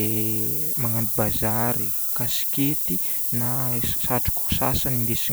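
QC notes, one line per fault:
Throughout, low bit depth with noise shaping: a steady, thin hiss about 5 dB louder than the speech rises sharply up top, which fits a 4-bit signal.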